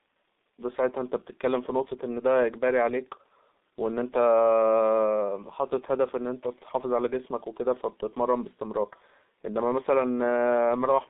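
From start to finish, the speech carries heavy G.723.1 codec damage. The line passes only about 200 Hz to 3.7 kHz, so it sounds muffled and thin, and the slow 30 ms frame updates leave consonants smeared and the tone hoarse, which fits a bitrate near 6 kbit/s.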